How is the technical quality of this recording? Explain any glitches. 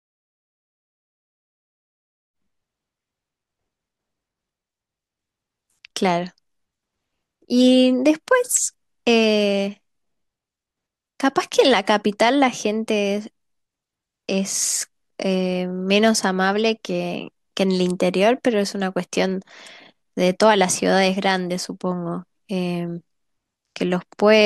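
Listening through this speech recording, nothing stood out as a technical problem.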